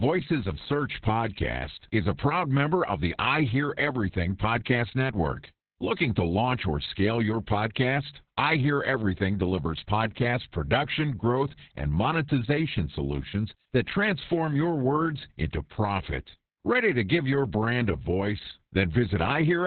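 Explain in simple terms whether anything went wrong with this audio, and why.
The speech has been squeezed hard by Opus voice compression from start to finish. It's been cut to narrowband, with nothing above about 4.2 kHz, so it sounds muffled and phone-like. The coder's rough guess at the voice's buzz leaves it hoarse and a bit robotic.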